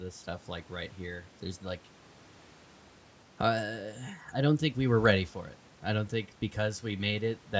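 Speech captured through a call's microphone processing, its lowest bass trimmed by the usual high-pass filter and nothing above 8 kHz, as expected for that path, with no technical faults present.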